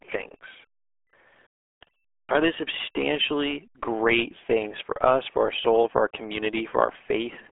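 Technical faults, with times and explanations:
Throughout, RealAudio 14.4 codec: speech sounds muffled and gargly, with nothing above 3.6 kHz and heavy low-bitrate damage that fits an 8 kbit/s dial-up stream.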